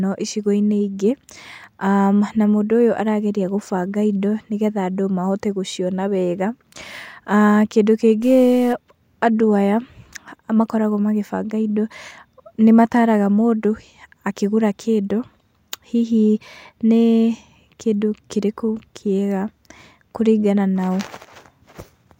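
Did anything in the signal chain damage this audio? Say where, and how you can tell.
Yes. From 8.23 to 8.73 s the speech turns distorted. This is likely a stuck bit at the converter, with one data bit fixed, offsetting half the sample values.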